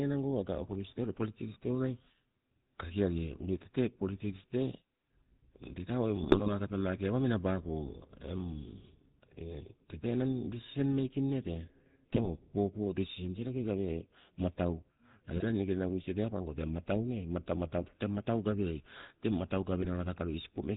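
From the start the speech carries the buzzy, gravelly roughness of the GSM full-rate codec, which fits a 13 kbps GSM full-rate coder. The coder rebuilds the voice from a vocal-tract filter driven by a sparse, regular pulse train. Two thirds of the excitation is thrown away. Nothing above 4 kHz survives. The damage is plainly audible throughout.

GSM bit errors break in four times: 6.22 to 6.49 s, 12.10 to 12.29 s, 15.36 to 15.45 s, and 19.82 to 19.87 s. Corrupted bits reached the decoder and scrambled its filter, pitch and gain values. Each hit frame is rebuilt wrongly. The voice squawks, pops and gargles, and the level jumps. The second burst is the harshest, which fits an error rate of about 2 percent. The others point to nearer 1.5 percent.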